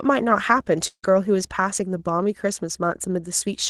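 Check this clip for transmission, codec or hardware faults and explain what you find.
One transmission fault is audible in the speech, heard through a call codec that leaves nothing above 12 kHz. From 0.87 to 1.05 s there is a long network dropout, likely from lost packets. About 160 ms of audio is missing. The receiver extends the last sound as a fading buzz or hiss for roughly 150 ms, then about 70 ms of silence follows before the speech resumes without the lost portion.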